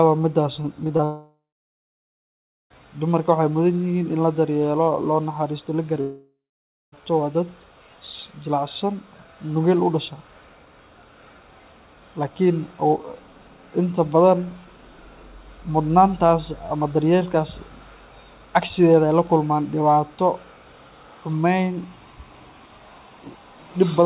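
From 0.62 to 1.04 s the speech breaks up with repeated packet loss, producing a robotic sound. Five short holes, the longest about 19 ms, are patched by stretching the preceding sound, so about a fifth of that span is concealed. The result is choppy, with pieces missing. On a spectrogram, brief smeared or repeated slices interrupt the speech, and the waveform shows small repeated segments. The whole spectrogram is empty above 4 kHz, as expected from the narrowband call path.

At 1.04 s this runs straight into a much longer gap lasting until 2.72 s, likely a long network dropout. The last sound is continued as a buzzy tail that fades, leaving about 1.3 s of silence before the speech resumes with that part missing. A second gap, likely another long network dropout, follows "daryeelo loo naxaristo la" from 6.01 to 7.03 s, with a shorter fading tail and about 0.56 s of silence. On both the waveform and the spectrogram, each appears as a decaying smear followed by a blank stretch.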